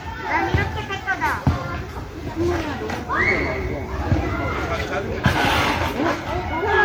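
From start to finish the sound has a swirly, hollow, smeared quality with blurred attacks, more than a single encode would leave. That's generation loss, likely from around seven MP3 passes near 96 kbit/s, each stacking fresh quantisation noise. Nothing survives above 19.9 kHz.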